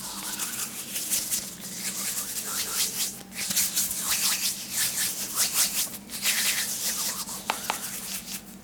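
A recording of everyday sounds, and the whole thing carries a doubled audio track: a second full-band copy trails roughly a fifth of a second behind at about the same level, dry and uncoloured, most likely captured again through a slower path. There are also two bursts where corrupt frames were decoded. At 3.50 to 3.58 s, a fairly loud glitchy blip spans a few damaged frames. At 5.84 to 5.99 s, a quieter, longer smear of wrong-frequency noise runs across several frames.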